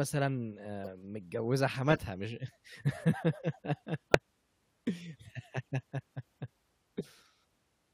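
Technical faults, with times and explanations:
0.84 to 0.87 s, corrupt frame decoded: A brief blip at about -30 dBFS. Damaged bits in a single frame were decoded anyway.
1.90 to 1.98 s, corrupt frame decoded: A short burst, a few frames long, at about -25 dBFS.
4.11 to 4.15 s, corrupt frame decoded: A sharp squeak, much louder, near -10 dBFS. Misread gains put energy at wrong frequencies.
6.98 to 7.01 s, corrupt frame decoded: Another faint blip, one frame, about -30 dBFS.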